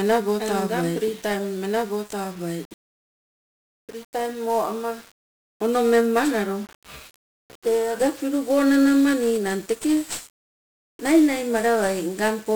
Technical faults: 1-bit DFPWM compression; doubled audio track

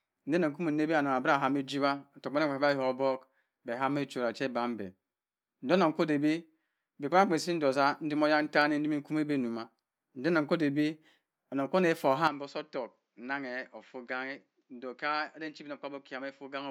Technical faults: input switched to a poorer device

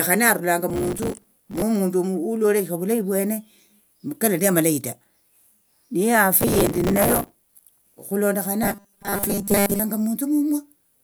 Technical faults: processor overload crackle; robotic sound from repeated short buffers

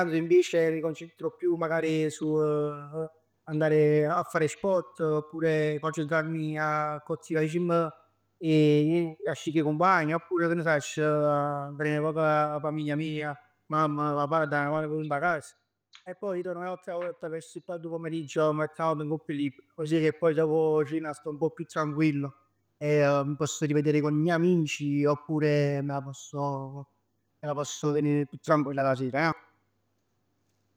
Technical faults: zipper noise

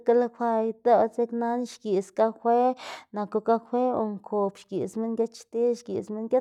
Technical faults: none

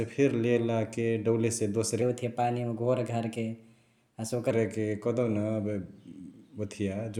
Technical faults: section at the wrong speed

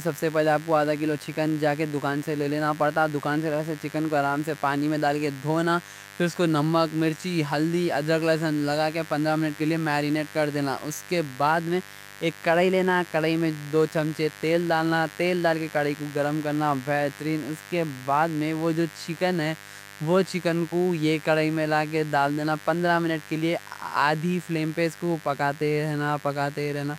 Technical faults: mains buzz

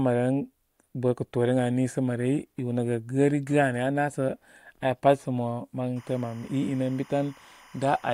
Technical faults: timecode bleed

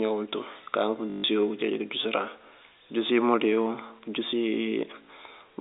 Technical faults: packet loss with last packet repeated

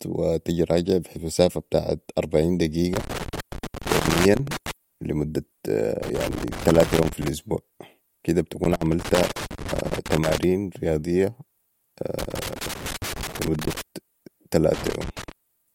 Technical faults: loose connector crackle

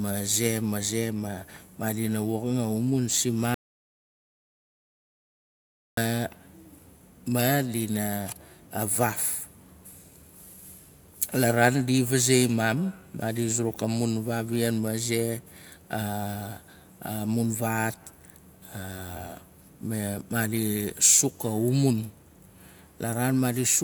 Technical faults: audio dropout to silence

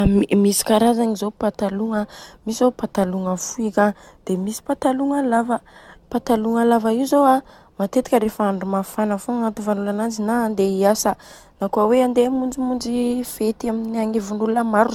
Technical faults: generation loss

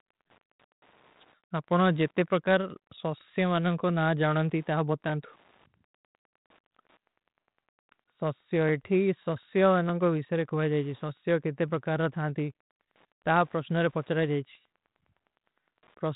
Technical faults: Wi-Fi interference

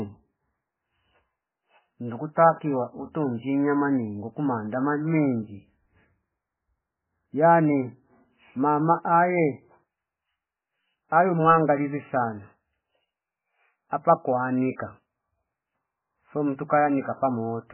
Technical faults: MP3 compression

